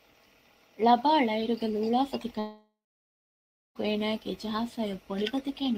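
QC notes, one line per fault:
2.39–3.77 s, long network dropout: about 1.36 s of the speech is gone, and the gap is filled with a continuation of the last sound that turns into a fading buzz or hiss over roughly a third of a second, then gives way to about 1.01 s of silence before the speech resumes further on with the missing stretch skipped. This is likely a receiver concealing lost packets by extending the final sound until it has nothing left to play.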